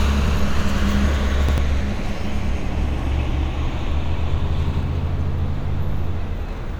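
At 0.28 s, 1.49 s and 4.74 s the audio stutters: a piece about 93 ms long plays once more, with a hard join at each end, which fits a 4096-sample buffer. This is a repeated buffer. Fresh data missed its deadline, so the device replayed what it already held, and about a tenth of a second of real audio is skipped each time. Unlike a dropout, nothing goes silent. The gap is filled with an exact copy.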